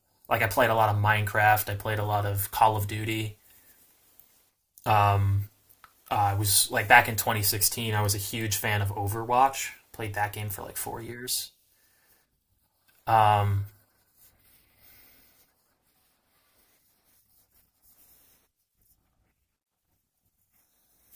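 No technical faults can be heard anywhere in this speech recording. Nothing in the audio stands out at any point as needing a timestamp.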